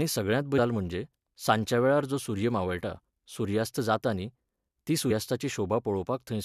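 At 0.58 s and again at 5.10 s there's a quick blip in the speech, each one from damaged data in the compressed stream. The data is corrupted there, so the decoder misreads those frames and briefly loses sync before locking back on.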